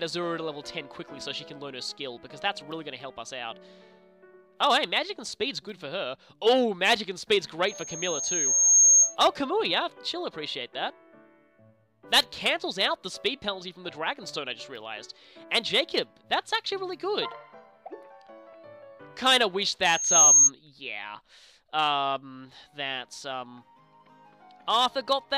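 At 7.68 s a loudspeaker feedback squeal starts: a microphone is picking up the loudspeaker it feeds, and at 6.5 kHz the loop gain exceeds one, so that tone builds on itself over roughly a second into a piercing whistle around 10 dB above the program before it cuts off at 9.16 s. The same 6.5 kHz squeal returns from 19.84 to 20.50 s, swelling faster, in under half a second, and peaking higher, around 15 dB above the sound.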